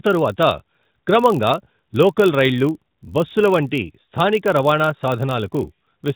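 Throughout, a block size mismatch (padded) zero-fills the tail of every 1024-sample block, stamping a steady 46.9 Hz buzz onto the speech while speed stays at 0.999.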